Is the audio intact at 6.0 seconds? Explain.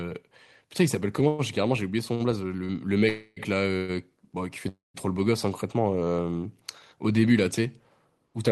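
Yes, the speech at 6.0 seconds plays through cleanly, with no audible fault at that moment.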